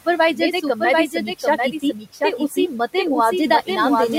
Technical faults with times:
0.00-4.19 doubled audio track
0.05-0.81 speech cut by the noise suppressor
1.07-2.73 speech cut by the noise suppressor

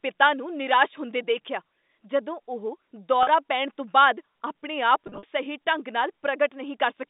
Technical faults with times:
3.23-3.27 packet loss with pitch repetition
5.07-5.23 packet loss with pitch repetition

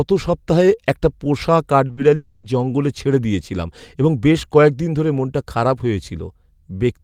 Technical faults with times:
1.87-1.99 short concealed packet loss
2.15-2.45 long network dropout

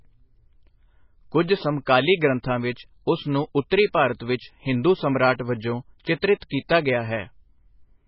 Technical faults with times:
0.00-8.07 MP3 compression
3.70 pre-echo
6.40-6.42 pre-echo

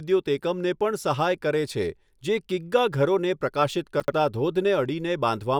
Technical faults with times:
4.00-4.12 chunks out of order

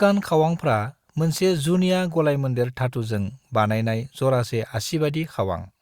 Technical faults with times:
none

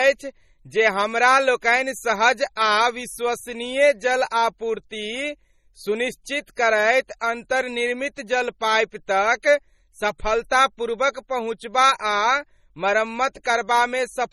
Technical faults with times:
0.00-14.33 MP3 compression
7.19 pre-echo

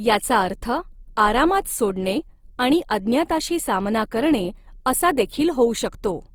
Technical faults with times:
0.00-6.34 Opus compression

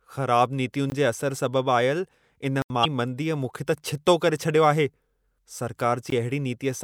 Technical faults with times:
0.90-0.92 block of digital silence
2.62-2.70 block of digital silence
2.81-2.85 damaged data in a compressed stream
5.34-5.37 damaged data in a compressed stream
6.10 block of digital silence

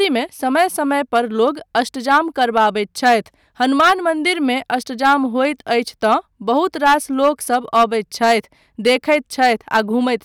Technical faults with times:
0.00-10.24 hard clipping

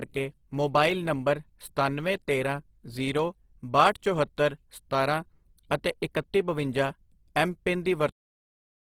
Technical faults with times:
0.00-8.87 Opus compression

